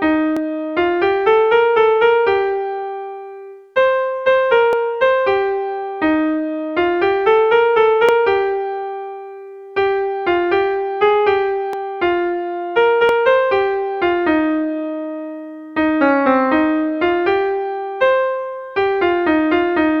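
Five single sharp clicks sound at 0.37, 4.73, 8.09, 11.73 and 13.09 seconds. Each is brief, with nothing audibly missing. They likely come from dropped samples, under a millisecond each. The waveform jumps ahead at each gap.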